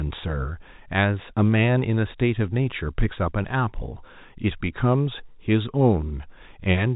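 No technical faults can be heard anywhere in the speech. It carries the narrow telephone band of G.711 coding, with nothing above 4 kHz and only a faint quantisation hiss riding along with the voice level.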